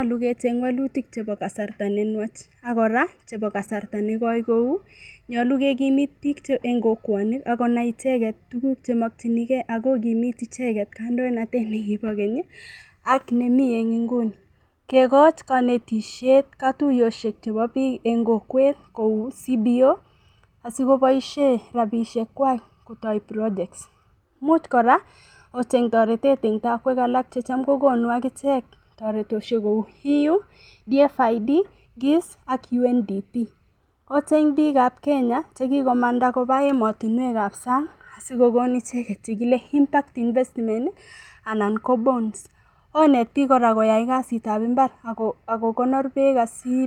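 Nothing stood out as a technical problem on listening to this speech recording.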